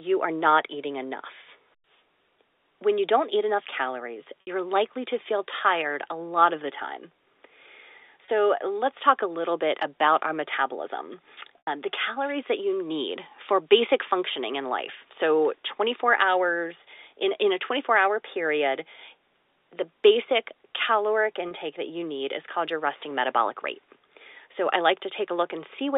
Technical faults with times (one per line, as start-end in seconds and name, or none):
4.41-4.47 packet loss with pitch repetition
8.25-8.28 packet loss with pitch repetition
11.58-11.67 packet loss with pitch repetition
21.48-21.51 packet loss with pitch repetition